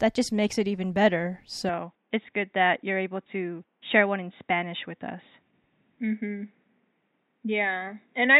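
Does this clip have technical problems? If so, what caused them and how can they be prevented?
Yes. At 1.69 s the sound narrows abruptly and stays that way to the end, with nothing above 3.8 kHz, no gap and no level jump, and a faint new noise floor appears well below the speech. This likely comes from the input switching to a poorer device that passes less bandwidth. Locking the recording input to one chosen microphone, and disabling automatic device switching and headset call profiles, prevents it.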